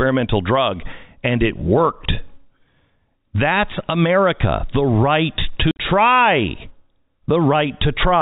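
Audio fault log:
5.71–5.79 s, packet loss filled with silence: about 70 ms of gaps, longest 50 ms, fits 10 ms packets; flat waveform holes, blank spectrogram columns, hard vertical edges.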